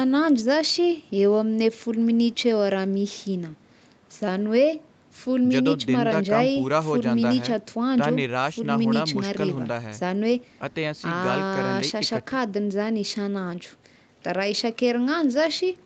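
Nothing is technically wrong with this speech clip; it carries the expected traits of a call path, with content reaching up to about 8 kHz.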